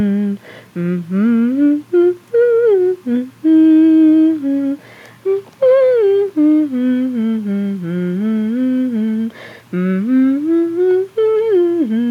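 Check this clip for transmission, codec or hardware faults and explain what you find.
No faults turn up anywhere in the clip.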